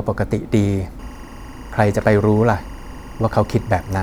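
A speech recording with timecode bleed coming in at 0.99 s and running right to the end: a steady chirpy warble sitting roughly 25 dB under the voice, flipping between about 1 kHz and 2 kHz. That's linear timecode leaking over from a neighbouring track or cable, and its rhythm fits 23.976 fps code.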